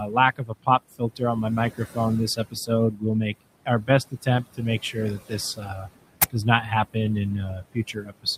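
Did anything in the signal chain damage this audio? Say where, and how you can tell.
Yes. The damage is in call processing. Noise removal was set too hard: the room noise, which sat about 14 dB below the speech, collapses to near silence strewn with twinkling specks. A mild room tone would leave a steady hiss instead.

Noise suppressor artifacts run through the whole clip. Background is pushed down by about 21 dB between words, then rises underneath them as each band is gated frame by frame. Codec artefacts would not track the gaps between words like this.

Speech was cut by the noise suppressor at 0.0–1.22 s (just before "on my"), 1.7–1.98 s (after "on my"), 2.36–3.35, 3.66–5.89, 6.3–6.96, and 7.49 s to the end. Drops reach about 16–21 dB, and the affected speech sounds swallowed rather than cleanly dropped as in packet loss.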